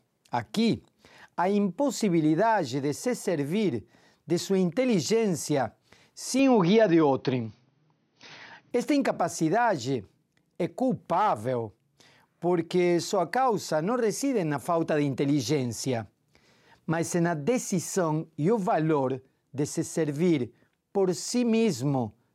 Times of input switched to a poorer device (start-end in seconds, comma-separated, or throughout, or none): 6.39-8.71